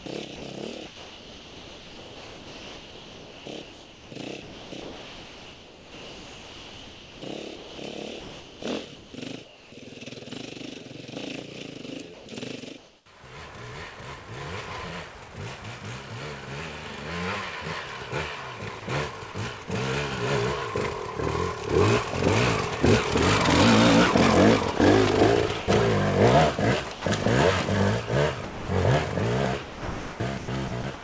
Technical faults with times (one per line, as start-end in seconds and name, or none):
0.00-9.72 sound chopped by the voice detector
12.14-13.06 comfort noise in place of the background
19.32 sound dropped by the voice detector
24.78-25.68 sound chopped by the voice detector
26.92-27.26 sound chopped by the voice detector
28.44-28.68 sound dropped by the voice detector
29.62-30.84 sound chopped by the voice detector